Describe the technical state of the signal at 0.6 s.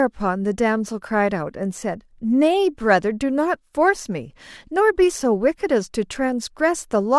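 At 0.6 s the speech signal is intact, with no dropout, distortion or other fault audible at that point.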